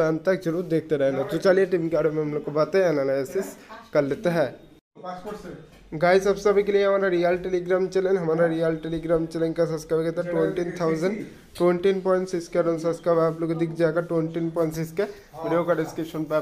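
No audible technical faults occur anywhere in this recording.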